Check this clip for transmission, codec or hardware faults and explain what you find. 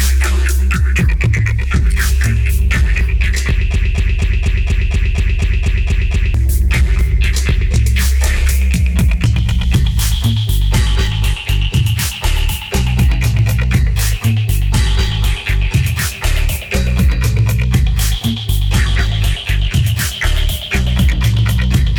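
One fault, a broken-record loop. From 3.76 to 6.34 s, playback likely stalled and resent its last buffer, so a 240 ms fragment repeats 11 times back to back, replacing the audio that belonged there.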